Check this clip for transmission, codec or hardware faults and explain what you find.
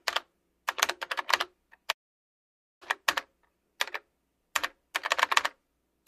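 There is one fault, a call audio freeze from 1.91 to 2.84 s. The sound stops with a very brief tail, then about 0.88 s of silence. The likely cause is packets held up in transit, draining the jitter buffer. Unlike a dropout, nothing is lost: the audio resumes where it stopped, 0.9 s late.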